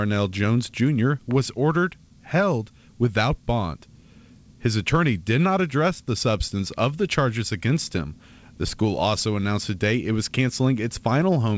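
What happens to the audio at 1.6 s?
Nothing goes wrong at 1.6 s: the speech there passes through intact, carrying only the ordinary band limit of a wideband call codec such as G.722, with nothing above about 8 kHz.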